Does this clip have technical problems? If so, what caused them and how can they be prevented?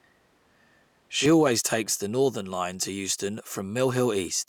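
Yes. From the start to 1.26 s the speech sounds roomy, hollow and thin in the bass, with little change in level and room noise roughly 35 dB below the speech. At 1.26 s it snaps back to close, full sound. This is likely a switch to a distant microphone, such as a camera microphone, while the close microphone's signal was missing. Monitor the close microphone from the first frame and confirm it is feeding the recording before each take begins.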